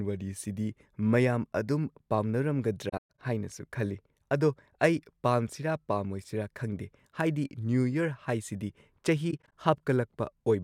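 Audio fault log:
2.89–3.19 s: AAC frame loss with muting. About 210 ms of decoded audio is zeroed, with the longest hole around 150 ms. The overlapping windows taper its edges. It shows as blank vertical bands on a spectrogram and as a waveform that fades to a flat line.
9.31–9.53 s: AAC frame loss with muting. Brief scattered dropouts total about 107 ms. They appear as thin, soft-edged empty columns on a spectrogram and as short tapered gaps in the waveform.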